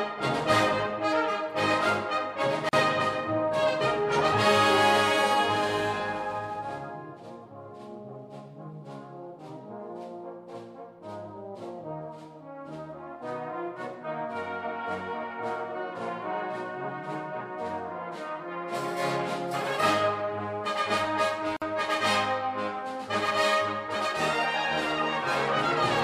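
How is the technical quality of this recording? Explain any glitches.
The recording has two brief dropouts where the sound cuts to silence and resumes. At 2.69 s a silence of about 41 ms opens, and at 21.57 s another of about 52 ms. Both have smeared edges before the sound picks up where it stopped. This is a gap at a join of encoded pieces: the segments were encoded separately and joined untrimmed, so each encoder's start delay and final-frame padding remain as silence.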